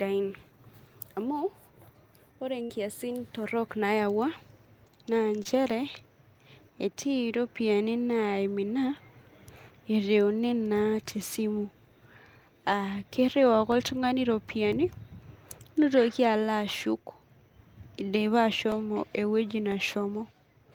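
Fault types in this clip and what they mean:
Burst of packet loss: Around 2.63 to 2.71 s a run of packets went missing in a row. The receiver bridged it by stretching the last bit of speech for roughly 60 ms and fading it down, so you get a short held buzz or hiss. Then the speech picks up again about 60 ms further along than it should, so that chunk of the sentence simply isn't there.
Short concealed packet loss: A much smaller hole at about 5.43 to 5.47 s. Something like 20 ms of audio never made it to the decoder in time, and the receiver papered over it with around 16 ms of synthesized continuation of the preceding sound before blending back into the real signal. It comes across as a quick smear or wobble, and a brief consonant there could get swallowed.
Periodic USB or driver dropouts: Starting right after "ereuni naa tesimu" at about 11.72 s and running to about 19.72 s, there's a tiny gap once every second, around ten in total. 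Each one loses about a millisecond of audio, replaced with silence, which points to something in the background stalling the USB bus or audio driver on a fixed schedule. You hear it as evenly spaced little ticks riding on the speech.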